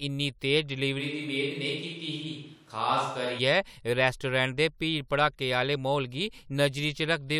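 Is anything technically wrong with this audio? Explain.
Yes. From 1.01 s to 3.37 s there is a switch to a distant microphone. The close microphone's feed was likely dropped and a farther pickup took over. At that range the microphone captures more room reflection and less direct sound, so the speech abruptly turns hollow and roomy, thinner in the low end, and about 5 dB quieter. A faint background noise rises beneath it, and the close sound snaps back just as suddenly at the end.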